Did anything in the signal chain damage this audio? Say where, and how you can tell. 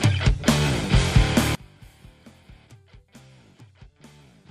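Yes. From 1.55 s to the end, the whole sound drops by about 30 dB, background included. The likely cause is one channel inverted in the analogue wiring. Summing to mono then cancels what both channels share. Only their small mismatch remains.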